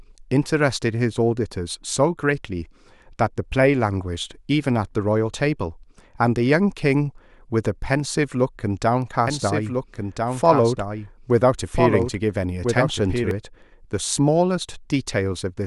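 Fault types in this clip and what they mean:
Doubled audio track, 9.27 to 13.31 s: a second full-band copy of the speech runs about a second and a half behind, roughly 5 dB quieter, with no decay or room colour, starting and stopping abruptly, likely a slower second capture path mixed back in.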